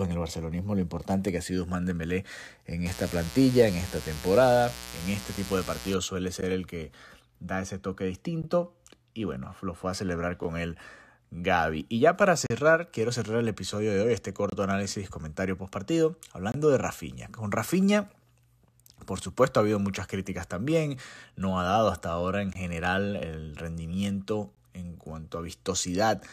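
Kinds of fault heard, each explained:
Mains buzz: A steady, raspy 60 Hz buzz sits under the speech from 2.86 to 5.95 s, about 15 dB below it. Sharp switching spikes twice per mains cycle add harmonics reaching well up into the kilohertz range.
Gap between stream segments: Short hard-edged silences of about 9 to 37 ms interrupt the speech at 2 s intervals from 6.41 s to 16.52 s, then again at 22.53 s and 24.55 s. One falls just after "lo fue a celebrar". Segment time stamps fail to meet, so silence fills them. No audio is lost.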